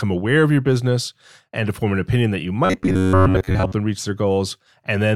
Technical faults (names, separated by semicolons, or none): robotic sound from repeated short buffers